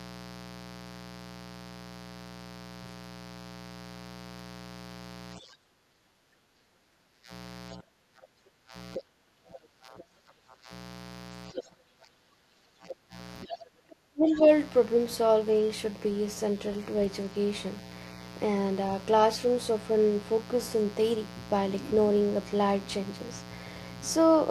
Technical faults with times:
0.00-24.50 mains buzz
5.38-10.71 speech suppressed in double talk
8.94-9.00 other side's voice leaking through
9.98-10.02 other side's voice leaking through
11.51-14.44 speech suppressed in double talk
11.55-11.63 other side's voice leaking through
12.90-12.94 other side's voice leaking through
13.49-13.55 other side's voice leaking through

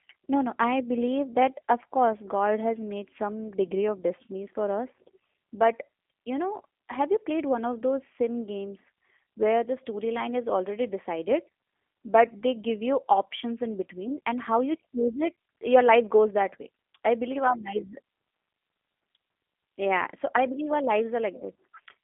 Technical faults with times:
0.00-22.04 G.729 codec

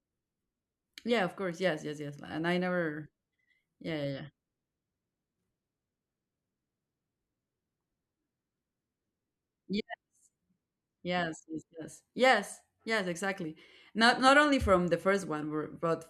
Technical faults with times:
none

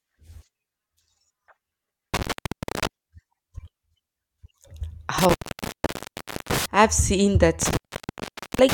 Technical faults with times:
2.14-2.87 intermittent contact
5.18-6.66 intermittent contact
7.62-8.73 intermittent contact

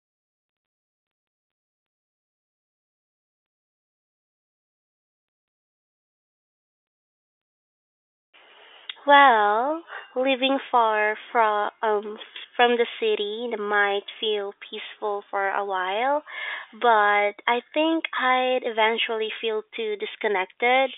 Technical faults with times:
none

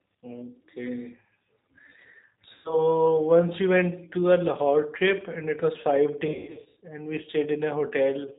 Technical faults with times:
0.00-8.39 G.729 codec
2.54-2.85 VoIP packet loss concealed by the speech codec
6.27-6.78 VoIP packet loss concealed by the speech codec

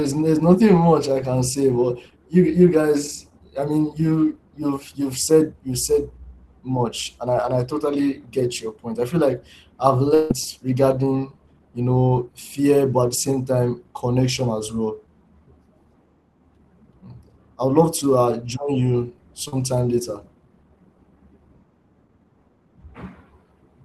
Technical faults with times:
10.14-10.31 long network dropout
19.48-19.53 short concealed packet loss

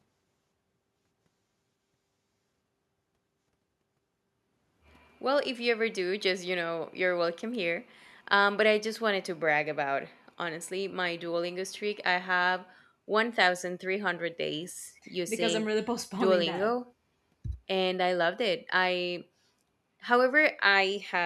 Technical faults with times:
none

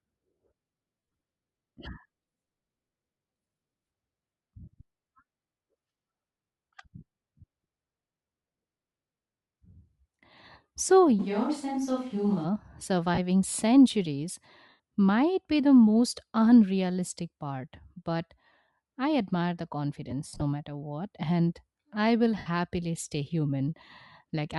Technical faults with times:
0.00-24.58 Bluetooth LC3 compression
0.99-1.23 lost LE Audio frames
11.21-12.43 switch to a distant microphone
13.14-13.19 lost LE Audio frames
14.69-14.79 lost LE Audio frames
20.28-20.42 lost LE Audio frames
22.38-22.46 lost LE Audio frames

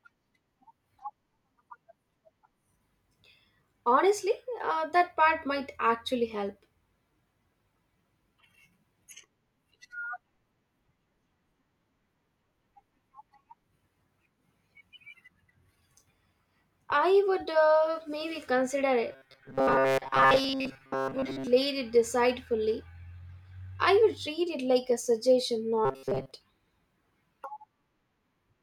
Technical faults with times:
19.12-21.48 robotic sound from repeated short buffers
25.85-26.31 robotic sound from repeated short buffers

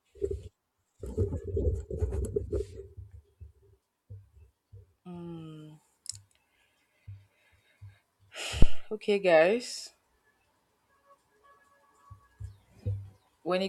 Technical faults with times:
8.62-8.87 phantom power thump

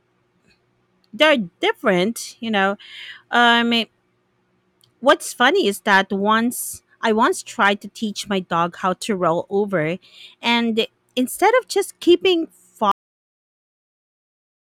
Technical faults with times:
1.22-1.27 hard clipping
5.08-5.48 hard clipping
5.91-5.99 hard clipping
7.63-7.68 hard clipping
12.91-14.63 cut-off end

